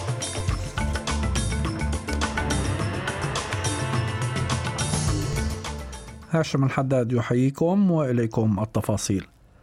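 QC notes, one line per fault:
0.40 s and 5.33 s, DC step: the waveform's zero line jumps abruptly by about -24 dBFS each time, then bleeds away through a high-pass near 20 Hz rather than holding. That sudden shift in the signal's baseline is heard as a short, low thump or click at each point. The offset drains within a few tens of milliseconds, so the surrounding sound carries on unchanged once it has passed.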